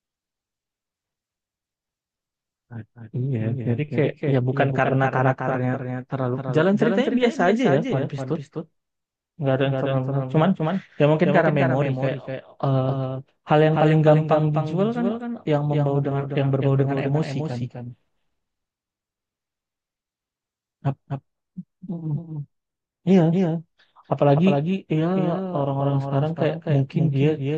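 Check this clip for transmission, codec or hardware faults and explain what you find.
One fault runs through the whole clip: a doubled audio track. The speech is followed by a clean, slightly quieter copy of itself, roughly a third of a second behind, with no decay or room colour. This likely comes from the same signal being captured a second time by a slower path.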